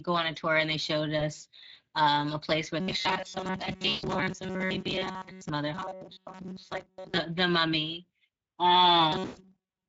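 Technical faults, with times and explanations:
Throughout: Speex codec. The speech has the plainly audible hoarse, grainy texture of a CELP coder starved of excitation bits, which points to a middle Speex setting around 16.8 kbps. The pitch and formant model keeps the sound intelligible, but the residual is coarsely quantised, so voiced sounds carry a rough noise layer. Any content above 8 kHz sounds like shaped hiss rather than real detail.
1.19–1.24 s, 3.89–4.05 s and 9.25–9.42 s: VoIP packet loss concealed by the speech codec. The gaps last about 20 ms, 140 ms and 120 ms, which fits one, seven and six lost 20 ms frames. In each gap the decoder keeps replaying its last pitch and filter at falling gain. Because each decoded frame depends on the previous one, the sound stays weak and distorted briefly after the gaps end.
2.80–5.49 s, 5.75–7.18 s and 9.12 s to the end: robotic sound from repeated short buffers. 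Across these spans the sound takes on a rigid, metallic buzz at 188 Hz that only loosely tracks the speech. A fixed 188 Hz pitch corresponds to a period of about 5.3 ms, which fits the last 5 ms or so of audio being looped. The likely cause is audio arriving too seldom, with roughly 70% of each span filled by repeats while real material is skipped.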